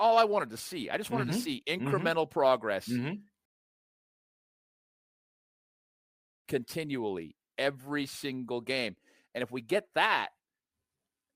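A rebuffering stall interrupts this speech clip from 3.45 s to 6.45 s: the sound drops to silence for 3 seconds, then picks up again with "continually every single game" exactly where it left off. The player emptied its store of downloaded audio and had to wait for more data to arrive before continuing, so no speech is skipped or repeated, but the recording runs 3 seconds longer than it should.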